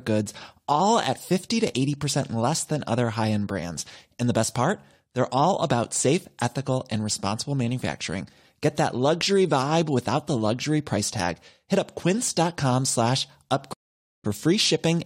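At 13.74 s the speech stops dead for 0.51 s, a stream reconnect: the link broke and a fresh decoder resumed roughly a third of a second further on.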